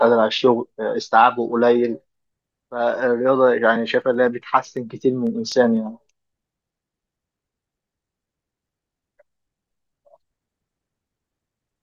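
From 4.02 s to 5.77 s the speech carries a row of evenly spaced ticks, about fifteen of them, one every 0.125 s, or eight per second. These are periodic USB or driver dropouts. At each interval something blocked the audio path and a tiny fraction of a millisecond of signal was skipped outright, so the waveform jumps and clicks at every join.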